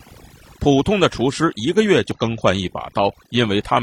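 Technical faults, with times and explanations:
Throughout: overdone noise removal. A noise reduction stage was pushed too hard, so frequency bands that fall near its noise estimate are cut far down or switched off. The quieter parts of the speech are caught as well. Between phrases the background drops to near silence, left with small twinkling specks.
2.11 to 2.17 s: damaged data in a compressed stream. For about 60 ms the compressed data is corrupt. The decoder misreads or rejects the frames there and loses sync. It then hunts for the next valid frame header. The result is a brief chirp, squawk, click or short hole.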